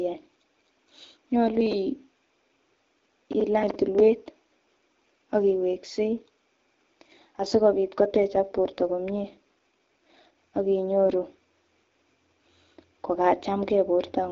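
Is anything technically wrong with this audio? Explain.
Yes. From 7.36 to 11.1 s there is an AMR rate drop in this HD Voice call. The speech turns rougher and more synthetic, which fits a fall from 12.65 to 8.85 kbit/s.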